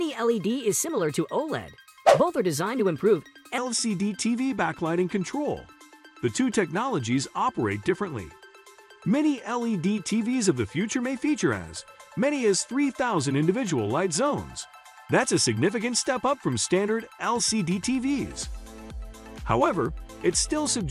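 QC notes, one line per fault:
0.00–3.58 s, section at the wrong speed: the opening runs about 1.21 times too fast, so the sound is both hurried and raised by roughly three semitones, and at 3.58 s it drops back to its natural rate and pitch. The likely cause is an edit or playback step that clocked this stretch at the wrong rate. Because timing and pitch move together, this is not a pitch shift or time-stretch, which would alter one without the other.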